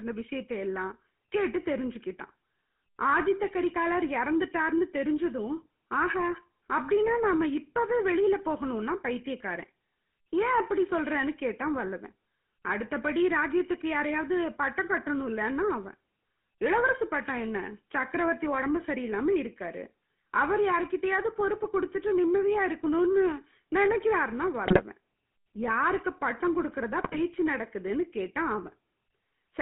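GSM full-rate codec damage runs through the whole of this speech recording. The band is held to roughly 150 Hz to 3.4 kHz, and the excitation, rebuilt from sparse, regularly spaced pulses at a rate that fits 13 kbps, gives the voice a plainly audible buzzy, gravelly roughness. GSM bit errors then strike from 24.66 to 24.82 s and again from 26.98 to 27.19 s. Corrupted filter, pitch and gain values in several consecutive frames twist the spectrum and throw the level around, so the sound breaks into squawks, pops and gargling. The damage points to an error rate of about 3% in the first burst and about 2% in the second.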